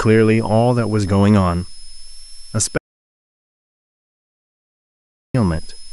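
A switching power supply running in an audible burst mode or beating with another one leaks a thin whistle throughout, its pitch wandering between about 5.1 and 5.3 kHz, roughly 25 dB below the speech. At 2.78 s the input was likely lost while recording continued writing silence, an audio dropout to silence: the speech cuts off mid-flow into total silence, with no room tone, until 5.34 s, about 2.57 s later.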